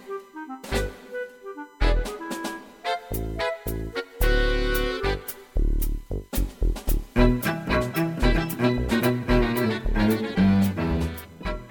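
A fixed 1 kHz USB whine, about 40 dB below the audio, persists throughout. Its 1 ms bus-frame pitch, far above mains hum, identifies it.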